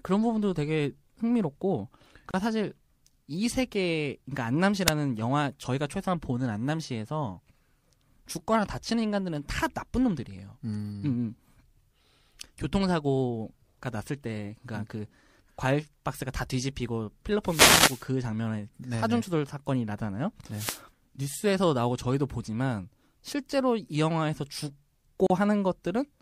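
A gap at a join of encoded pieces opens twice in this speech recording: at 2.31 to 2.34 s, lasting about 30 ms, and at 25.27 to 25.30 s, about 34 ms. In each, the speech drops to silence and then resumes exactly where it left off. The pattern points to separately encoded segments spliced together without trimming, so the encoder's start-up delay and the padding of its final frame remain as a short dead hole. The codec softens the hard edges. Wireless microphone noise hits appear at 4.86 to 4.90 s as a brief burst, at 17.44 to 18.06 s as a longer swish of about 0.6 s, and at 20.50 to 20.82 s. Each is a rush of static over the speech. An analogue FM radio link fades when reflected signals cancel, the receiver's noise floor climbs, and in the deeper dips it breaks into crackle that masks the voice.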